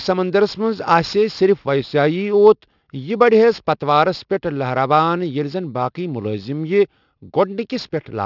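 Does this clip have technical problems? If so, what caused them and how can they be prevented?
Yes. Aliasing runs throughout. The speech was downsampled without an anti-aliasing filter, and the folding point at 6 kHz fits a drop from 44.1 kHz to 12 kHz. Energy above that reflects back as unrelated pitches about 25 dB below the speech, making sibilants gritty and metallic. Low-pass filtering below half the new sample rate before resampling prevents it.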